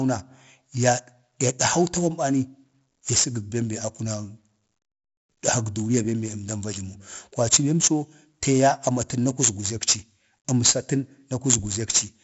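The whole clip is marked by 4-bit ADPCM compression. Each sample is coded as a small step from a prediction, and the step size adapts as the speech moves. The error rides on the signal level, so every loud syllable carries a gritty hiss. Sharp onsets distort where the step lags behind. The damage is heavy. Nothing reaches above about 7.7 kHz, which fits 64 kbps ADPCM at a 16 kHz sample rate and dulls the top end.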